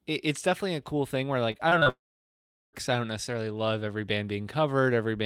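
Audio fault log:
1.51–1.88 s, repeated packet loss (robotic sound): The speech turns choppy, with small pieces cut out and smeared over. Five short gaps, the longest about 24 ms, remove roughly 100 ms of audio in under 0.4 s. Each gap was bridged by stretching the sound just before it, so synthetic filler covers about 28% of the stretch. Because the holes come so close together, the speech has a robotic texture instead of sounding like a single dropout.
1.90–2.75 s, long network dropout: Right after the choppy stretch, the speech gives way to a brief fading buzz or hiss and then falls into silence for about 0.75 s. About 840 ms of speech is missing, and it resumes further on without the lost part. The likely cause is a long interruption in which no audio reached the receiver. The receiver briefly extended the last sound, which faded out, and nothing filled the rest of the gap.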